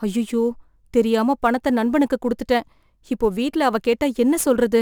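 A hiss and grainy roughness rides on the speech throughout, strongest on loud and bright sounds and gone in the pauses, sitting roughly 30 dB below the signal. It is sample clock jitter: the converter's clock wanders by a few microseconds, mistiming samples.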